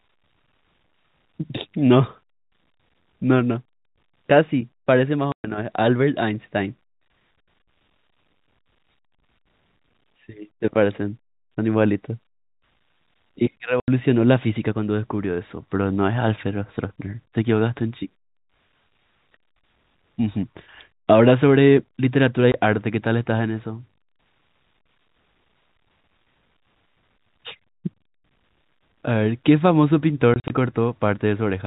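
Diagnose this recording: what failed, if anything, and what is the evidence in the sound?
Network stage: packet loss filled with silence cuts hard-edged dead gaps at 5.32–5.44, 13.8–13.88, 22.52–22.54 and scattered across 30.34–30.5 s. The gap lengths fit 20 ms packets, and they appear as flat silent runs on the waveform and blank spectrogram columns with sharp vertical edges.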